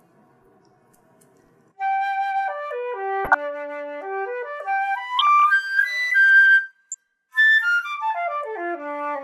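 The audio has DAB burbling in three places: 3.25 to 3.37 s, 5.19 to 5.44 s, and 6.92 to 6.95 s. Each is a short patch of burbling over the sound. Weak reception lets bit errors slip past the error correction into the MP2 data, at a small fraction of one percent. Corrupted samples then put short blips of noise in single sub-bands, and where corrupted scale factors get through, sub-bands jump in level for up to a frame. The longest burst points to about a dozen damaged frames.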